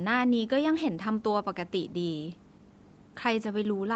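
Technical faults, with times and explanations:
Nothing wrong turns up in this speech clip; it just has the usual call-audio sound, with nothing above about 8 kHz, which fits its trip through a call's microphone processing and codec.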